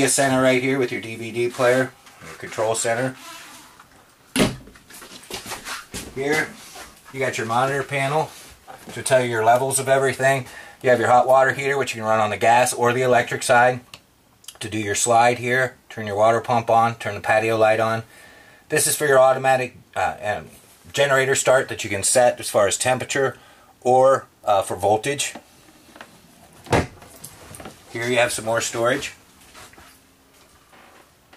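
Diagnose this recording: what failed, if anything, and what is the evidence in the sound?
Nothing failed; no fault found.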